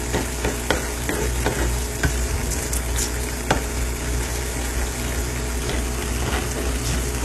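HE-AAC compression runs throughout, likely the cause of the plainly audible damage. The treble is synthesised from copied lower bands rather than coded, so it sounds gritty and metallic. Nothing survives above 12.3 kHz, which fits a very low bitrate around 16 kbps.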